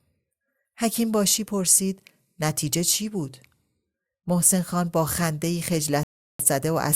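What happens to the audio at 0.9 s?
Nothing goes wrong at 0.9 s: the speech carries on intact through that moment, with no dropout, click or distortion.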